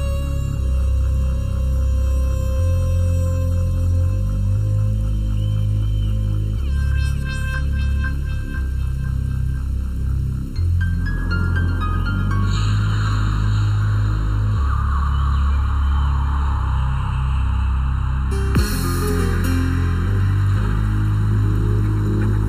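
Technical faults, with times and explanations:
Throughout, channel delay (comb filtering): one channel runs behind the other by roughly 0.7 ms, and summing them cancels shared content in evenly spaced notches starting near 700 Hz, giving a hollow, phasey tone. Unlike a phaser, the notches never sweep.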